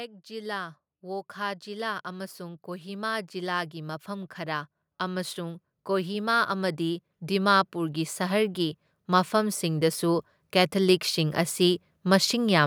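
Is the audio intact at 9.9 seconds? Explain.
No, 9.9 s sits right in the middle of an automatic gain rise running from 0.27 to 12.2 s. The AGC judged the input too quiet and kept pushing its gain up, about 20 dB overall, so the speech and the background noise swell together steadily.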